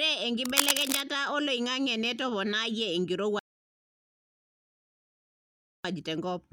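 From 0.45 to 1.01 s, a burst of cable scratch noise rides over the speech as dense, irregular crackling and rustling, at roughly the same level as the speech itself. The behaviour is consistent with a worn cable, connector or control being moved, the likely cause being contact resistance fluctuating rapidly at a loose joint. Each jump in resistance modulates the signal path and injects uneven noise bursts, which stop once the contact settles.

At 3.39 s the audio drops to silence and stays there until 5.85 s, a rebuffering stall lasting 2.45 s. Playback drained its supply of downloaded audio and halted until more data arrived, then picked up from exactly the point where it stopped. No material is skipped or repeated. The fault adds 2.45 s of dead air to the running time, breaking the flow of the speech at that point.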